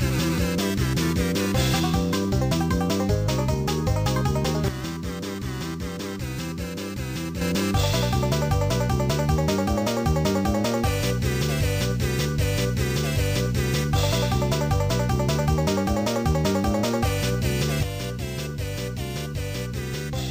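At 4.68 s, then again at 17.83 s, there's a sudden gain jump: level and noise floor drop together, about 7 then 6 dB, likely an unramped digital gain change.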